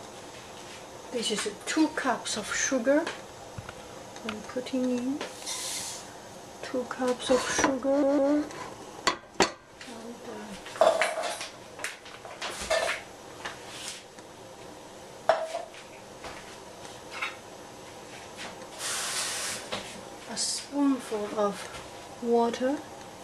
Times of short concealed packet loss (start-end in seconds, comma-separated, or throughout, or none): none